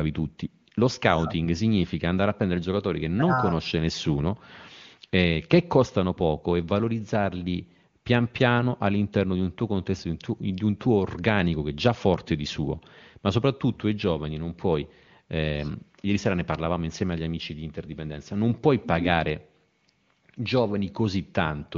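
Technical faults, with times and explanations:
No technical faults can be heard in this speech clip. It comes through an AMR wideband (HD Voice) codec path whose speech stays clear and only faintly coloured by coding, which fits the highest rate, near 23.85 kbit/s.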